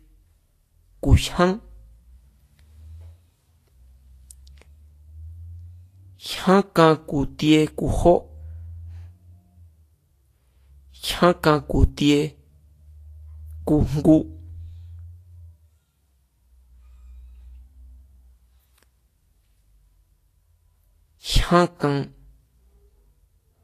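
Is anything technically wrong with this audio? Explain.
Yes. Throughout the speech the treble sounds hissy and grainy, with a hard ceiling at 14.2 kHz. This is likely Vorbis compression at a low bitrate, around 33 kbps. Coarsely quantised high-frequency detail turns into noise, and a spectrogram would show smeared, speckled treble below an empty band.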